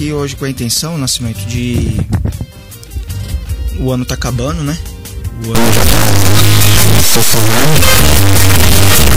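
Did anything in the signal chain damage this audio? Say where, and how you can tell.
Yes. From 5.55 s to the end, harsh buzzy distortion appears, with jumps near full scale. This is a stuck bit, likely in the converter's top bit.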